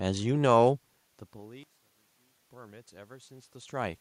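From 1.63 to 2.43 s the speech falls by about 24 dB to a faint copy, likely from one channel inverted, which cancels the shared centre when summed to mono.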